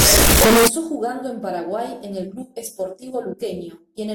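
Right from the start, 0 to about 0.68 s, the speech turns into a blast of harsh, squared-off noise sitting at an almost fixed, high level, with background hiss as loud as the talking. That's the float read as integer fault, likely 32-bit float samples being read as 32-bit integers. The sign and exponent bits end up setting the level, so even quiet passages slam up to that same flattened, buzzy loudness.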